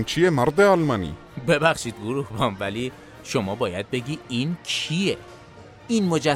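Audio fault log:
No fault is heard in this audio.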